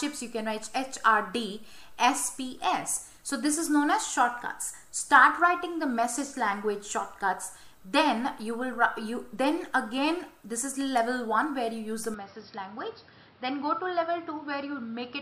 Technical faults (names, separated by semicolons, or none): input switched to a poorer device